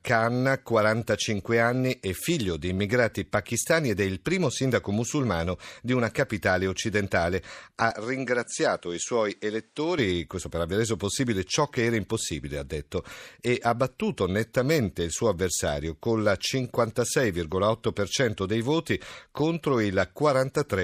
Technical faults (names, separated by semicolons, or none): input switched to a poorer device